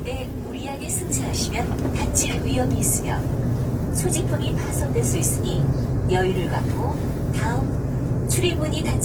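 Opus compression runs throughout this clip of sounds, and the damage is plainly audible. Tonal parts turn grainy, rough and noisy, though without the swirling spectral holes of MP3. The cause is likely Opus in its music (CELT) mode at a bitrate consistent with about 16 kbps. It keeps each band's energy but, when short of bits, refills bands by folding lower content or with noise. The bandwidth remains full, reaching 20.2 kHz.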